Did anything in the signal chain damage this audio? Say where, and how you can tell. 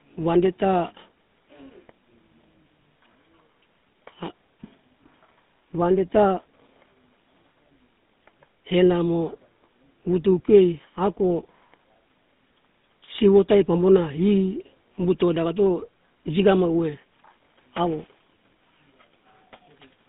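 Yes, at the codec stage: GSM full-rate coding throughout. The speech sounds buzzy and gravelly, nothing is present above 3.8 kHz, and the band sits near 150 Hz to 3.6 kHz. This fits 13 kbps pulse-excited coding.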